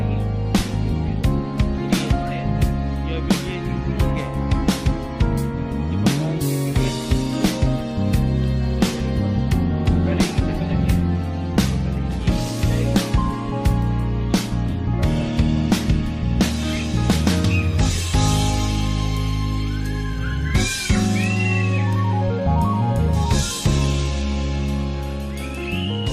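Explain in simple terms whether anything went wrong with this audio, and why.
Nothing went wrong with this audio that a careful listener can hear. No moment in it stands out as damaged or disturbed by a technical problem.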